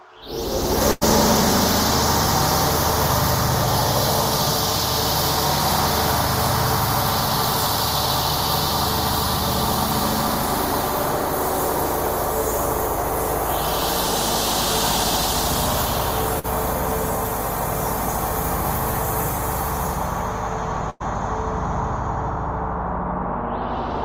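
A burst of packet loss hits at 0.91–1.03 s, 16.39–16.46 s and 20.90–21.02 s. Each time, the last sound is stretched and faded for 98, 46 and 103 ms. The audio then jumps ahead, skipping 100, 40 and 100 ms.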